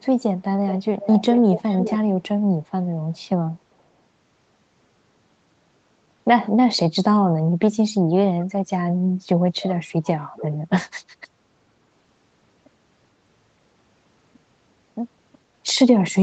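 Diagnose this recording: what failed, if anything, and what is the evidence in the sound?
A faint delayed copy of the speech trails about 0.41 s behind at 0.68–0.83 s and 1.0–1.98 s, roughly 10–15 dB down: likely an echo leak, where the far end's echo canceller let loudspeaker pickup through.

The voice dips sharply, by roughly 30 dB, in pieces across 7.7–8.66 s and 8.92–10.71 s: likely speech suppressed in double talk, where the canceller clamped the talker during overlap.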